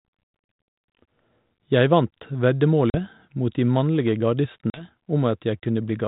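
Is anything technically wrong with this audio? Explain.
Yes. Packet loss on an ADPCM call occurs at 0.52–0.54 s, 2.90–2.96 s (just before "mot de mannlige") and 4.70–4.84 s (just after it). About one then two packets vanish, leaving 20 ms and 40 ms silent holes with hard edges. The decoder's adaptive predictor and step size then drift from the sender's, so the speech resumes with brief distortion before settling.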